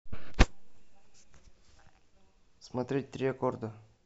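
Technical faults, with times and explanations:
No technical faults can be heard in this speech.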